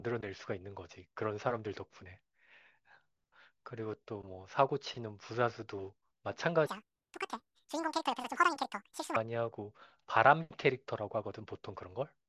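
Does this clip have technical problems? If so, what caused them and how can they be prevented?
Yes. From 6.67 to 9.16 s there is a wrong sample rate fault. The speech runs at double speed and a full octave (12 semitones) higher, which fits 16 kHz audio being played at 32 kHz without conversion. On a spectrogram, harmonics and formants jump to twice their frequency and the energy reaches about 16 kHz instead of 8 kHz. On the waveform, syllables are squeezed to half their length. Prevent it by resampling to the output device's rate or declaring the correct rate in the stream metadata.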